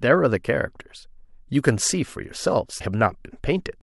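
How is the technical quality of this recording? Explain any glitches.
The speech has one audible glitch, near the end. From 2.78 to 2.81 s, the audio breaks up briefly and jumps ahead. The disturbance lasts about 30 ms, a little over one 26 ms MP3 frame. The likely cause is a broken MP3 bit reservoir. Data was lost at a cut. The next frame then reached back for borrowed bits and found bytes from the wrong frame. The decoder produced garbage for that short stretch before recovering.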